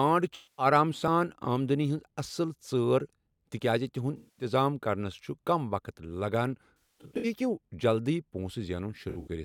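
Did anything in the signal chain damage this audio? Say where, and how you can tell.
Yes, AAC frame loss with concealment at the codec/network stage, at 0.35–0.66, 4.16–4.45, 6.81–7.25 and 9.09–9.28 s: smeared, phasey patches where the decoder recycled the last good spectrum, visible as blurred, flattened spectrogram blocks.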